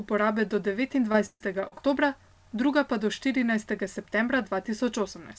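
Repeated packet loss (robotic sound) hits this speech recording from 1.12 to 1.81 s. Five breaks, the longest 142 ms, are each bridged by stretching the preceding sound, so about a third of that stretch is concealment, giving a choppy texture with fragments missing. The call path's 8 kHz ceiling fits G.722.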